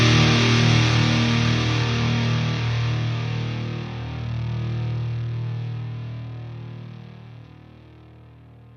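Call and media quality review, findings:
No call or media quality faults found.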